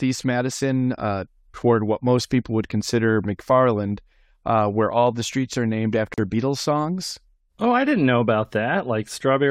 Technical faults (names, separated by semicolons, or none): gap at a join of encoded pieces